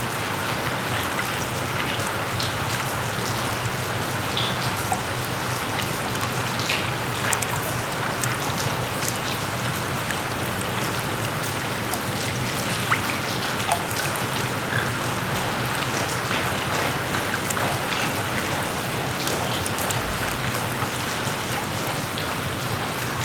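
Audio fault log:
No faults heard anywhere in this recording.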